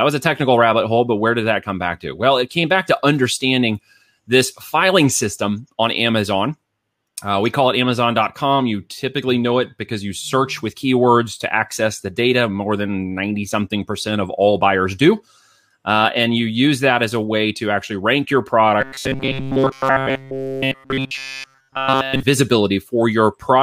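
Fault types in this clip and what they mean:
Robotic sound from repeated short buffers: After "to actually rank your", the speech becomes a rigid metallic buzz near 134 Hz throughout. Likely cause: a 7.5 ms buffer replayed repeatedly.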